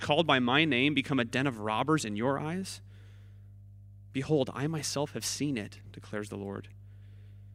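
Mains hum runs under the speech for the entire clip: a steady 50 Hz tone, with some low harmonics, sitting roughly 20 dB below the signal, from power-line interference leaking in through a ground loop or nearby transformer. A spectrogram shows an unbroken horizontal line at 50 Hz.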